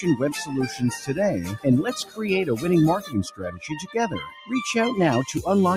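From the start, a noise suppressor built for speech is left running on this audio, and it keeps treating the steady, sustained parts as noise. Level swings by something like 10 dB as the suppressor clamps down and lets go, so held material and tails get pulled under while sharper onsets slip through. The result has a pumping, fluttery quality, and the sound thins out whenever things hold still.

There are three spots where the suppressor cuts the sound harder than the rest. The first, at 2.04 to 2.19 s, dips by about 12 dB for a brief stretch. The longest runs from 3.0 to 3.95 s. For most of that second the sound sags, bottoming out at about 13 dB down. The last is at 4.3 to 4.51 s, a quick drop of about 10 dB.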